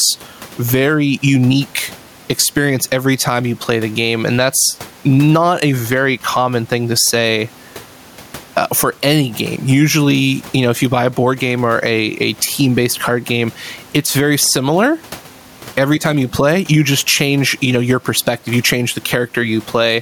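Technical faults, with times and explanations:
Throughout, gain pumping: the input gain is likely set far too high for the microphone, so a fast limiter or compressor clamps down on every loud syllable and releases in the pauses. The level swings by around 10 dB. The room noise sits about 33 dB below the speech. Loud and quiet passages are pressed toward one level, leaving the speech squashed.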